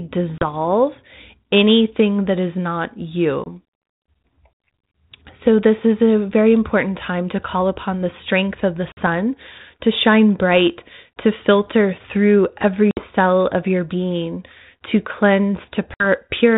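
Packet loss on an ADPCM call drops silent holes at 0.38, 3.44 (after "anything that is not"), 8.92 (after "the strength of the"), 12.91 and 15.94 s. The missing stretches are 30, 20, 50, 60 and 60 ms, each a few packets. The gap at 12.91 s falls between "to filter through every" and "of your being to". After each hard-edged hole, the decoder's predictor has lost track of the sender's, so speech restarts slightly distorted, then settles within tens of milliseconds. The narrowband G.726 ADPCM sound, which fits 32 kbit/s, carries only light coding damage.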